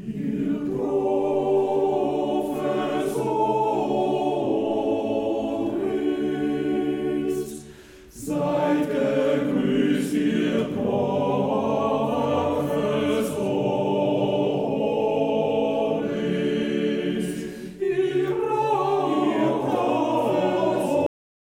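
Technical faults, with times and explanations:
21.06 s, cut-off end: the sound stops mid-event and falls straight to digital silence for the final half second, with no decay or tail. The closing buffers were never written. Unlike a fade-out, there is no taper, and unlike a dropout, nothing resumes afterwards.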